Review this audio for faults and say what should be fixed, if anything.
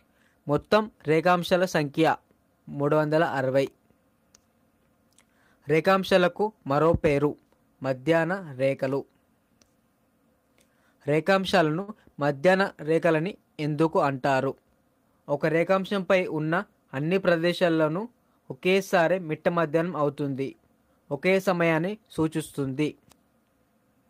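There's a short stall from a late packet at about 11.81 to 11.90 s: a packet showed up late, the jitter buffer ran dry, and the receiver stretched the last sound for 65 ms before carrying on. Nothing's lost, but it adds 65 ms of delay. A deeper or adaptive jitter buffer would prevent it.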